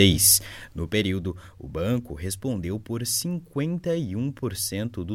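From 0.28 to 1.21 s the level drops by around 10 dB in 1 dB steps, about ten per second, rather than as a continuous ramp. Each unsmoothed jump leaves a small click, producing zipper noise: a soft ticking riding on the sound during the fade.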